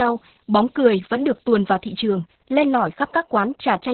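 Short speech clip with heavy Opus voice compression all the way through. Nothing comes through above about 4.3 kHz, so the voice sounds muffled and phone-like, which fits the codec squeezing down to narrowband SILK coding at a very low bitrate, somewhere around 6 kbps. At that rate the excitation is coded so coarsely that the voice turns hoarse and a bit robotic, and the damage is heavy from start to finish.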